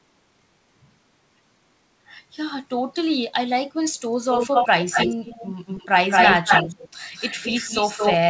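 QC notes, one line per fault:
4.33–4.68 s, 4.91–5.88 s, 6.1–6.89 s, 7.15–8.17 s, echo leak: a second copy of the speech trails it by 221 ms, about as loud as the speech itself, louder around 6.1 s and softer after 7.15 s. This is likely a far-end loudspeaker echo the canceller failed to remove, heard over a band that stops at 8 kHz, consistent with G.722 at 64 kbps.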